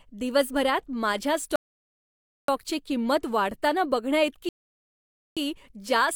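Rebuffering stalls interrupt this speech clip twice, from 1.56 to 2.48 s and from 4.49 to 5.37 s. Each time the player has run dry of downloaded audio, so the sound drops to silence and waits for more data. It then picks up exactly where it halted, resuming at "किंमत वाढताना" after the first gap. No audio is skipped, but the pauses add about 0.93 s and 0.88 s to playback.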